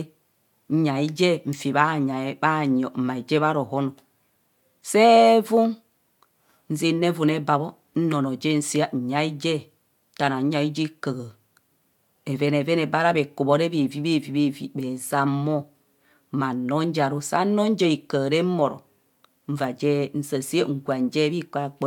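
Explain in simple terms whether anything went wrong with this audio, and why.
Nothing went wrong with this speech recording. At no point does anything happen to the sound that shouldn't.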